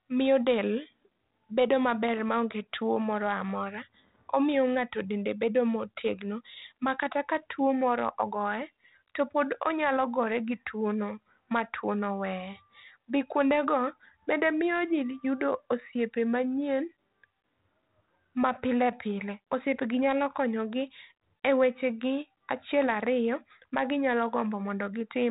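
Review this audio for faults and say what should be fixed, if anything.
Nothing here needs fixing, since no faults turn up anywhere in this speech recording.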